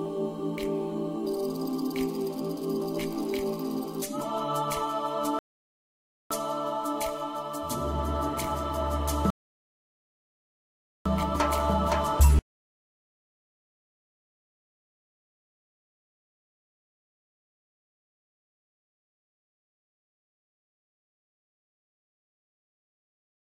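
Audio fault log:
5.39–6.31 s and 9.30–11.06 s: rebuffering stall. Playback freezes into silence for about 0.92 s, then 1.75 s, while the player waits for more data, then continues exactly where it stopped. Unlike a dropout, no sound is skipped; only time is added.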